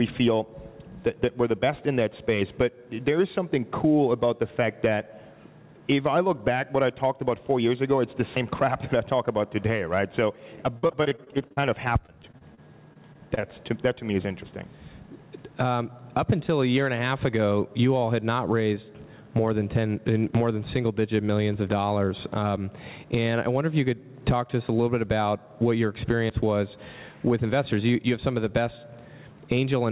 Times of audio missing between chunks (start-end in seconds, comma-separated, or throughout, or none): 8.37, 14.42, 20.35, 26.30